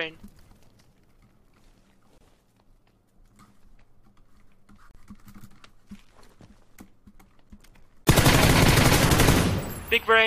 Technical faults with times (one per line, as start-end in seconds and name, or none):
2.18-2.21 gap at a join of encoded pieces
4.91-4.95 gap at a join of encoded pieces
8.05-8.08 gap at a join of encoded pieces